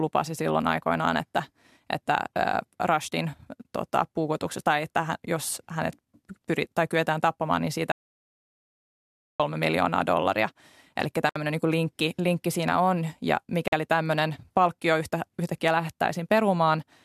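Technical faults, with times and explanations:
7.92 to 9.40 s: audio dropout to silence. Right after "tai kyetään tappamaan niin" the speech stops dead. About 1.48 s of silence follows, with no room tone at all. The speech then resumes at "miljoonaa dollaria". The input signal was likely lost, through a dropped connection or a mute, while the recorder kept writing silence. Whatever was said in that stretch is missing and cannot be recovered.
11.29 to 11.36 s and 13.68 to 13.73 s: gap at a join of encoded pieces. A 64 ms hole opens just before "niin linkki linkki siinä". A 47 ms hole falls between "linkki siinä on ja" and "tämmöinen palkkio yhtä yhtäkkiä". Each is a brief silence whose edges are smeared by the codec. The speech then picks up where it stopped. Separately encoded segments were joined without trimming the encoder's start delay and end padding.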